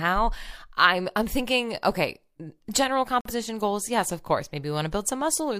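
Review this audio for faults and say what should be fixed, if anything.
A corrupt frame muted the speech from 3.21 to 3.31 s: a damaged compressed frame was rejected by the decoder and replaced with silence, leaving an abrupt 0.1 s gap. Protecting the stream with checksums plus error correction or retransmission, and concealing lost frames instead of muting them, would prevent this.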